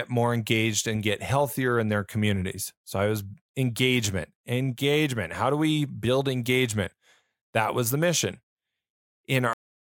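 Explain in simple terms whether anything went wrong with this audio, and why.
Something went wrong at the end: the speech has a cut-off end at 9.53 s. The final stretch of audio was never written out, so the sound stops mid-sound and drops straight into digital silence, with no natural fade or decay.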